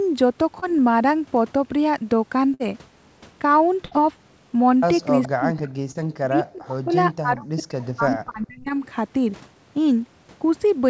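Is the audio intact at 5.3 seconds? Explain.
No. From 5.23 to 5.28 s there is an echo leak: a faint copy delayed about 420 ms, roughly 20 dB down, likely from an incomplete echo canceller. From 5.27 to 5.70 s there is speech suppressed in double talk: during overlapping talk, the speech drops by around 40 dB, affected for about 300 ms in total, likely from the echo canceller.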